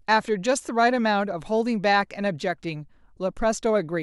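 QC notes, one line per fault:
No faults heard in this speech clip.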